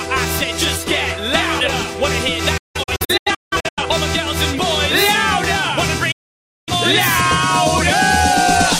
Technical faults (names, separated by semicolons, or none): digital broadcast dropout